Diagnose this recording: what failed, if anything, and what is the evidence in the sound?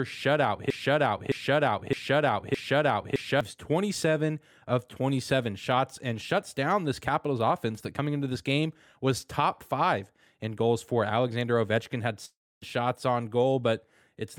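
From 0.70 s to 3.41 s the recording hits a broken-record loop. A chunk of about 0.61 s plays four times, back to back and identical, and whatever speech belonged in that stretch never appears. The playback or streaming stage likely stalled and kept re-sending the last fragment in its buffer until fresh data showed up. The exact, seamless repeats are the giveaway. A talker never repeats a chunk that precisely.

Around 12.25 s there's a long network dropout lasting roughly 0.36 s. The receiver fills the gap by stretching the last sound into a fading buzz, and about 0.26 s of that ends up as plain silence before the audio resumes at "shots on". The speech from that gap is simply missing. That fade-then-silence pattern is what you get when packets stop arriving and concealment runs out, so the network is the likely culprit.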